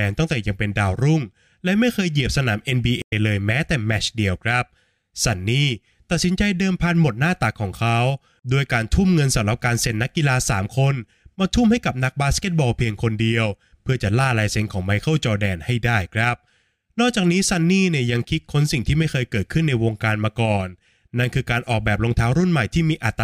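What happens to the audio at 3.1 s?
A stream reconnect runs from 3.02 to 3.13 s: 80 ms of silence, then a fresh decoder resumes about 70 ms further on, skipping sound rather than simply pausing like a dropout.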